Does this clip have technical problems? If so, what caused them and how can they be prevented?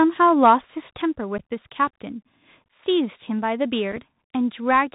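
Yes. The headset ran the Bluetooth CVSD headset codec, a one-bit 64 kHz delta coder whose step size adapts and which passes nothing above 4 kHz. Throughout the clip the speech is plainly muffled and narrowband, with scratchy s sounds and a granular hiss underneath. Prevention: use a headset and phone that negotiate a wideband codec such as mSBC or LC3.

At 1.02 s the input gain drops in a single step of about 5 dB, pulling voice and background down together. The likely cause is the call software lowering the microphone's device volume automatically. Prevention: disable automatic microphone gain adjustment and set the input level manually.

Unconcealed Bluetooth headset packet loss occurred twice, with missing audio filled by silence or an idle pattern rather than concealed. From 1.38 to 1.40 s a hole of about 11 ms, which fits roughly three packets, cuts the speech with abrupt edges. From 3.92 to 3.99 s, 15 ms is lost in short gaps scattered over 60 ms, the longest 3.8 ms, which fits about four packets. 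That stretch sounds crackly and chopped. Prevention: keep the headset close to the phone, away from Wi-Fi and other 2.4 GHz interference, and enable packet loss concealment.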